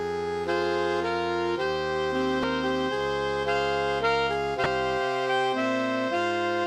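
A brief glitch breaks the sound from 2.41 to 2.44 s and again from 4.63 to 4.66 s, each about 34 ms long. This is damaged data in a compressed stream: corrupted bytes made the decoder misread those frames and lose sync before recovering.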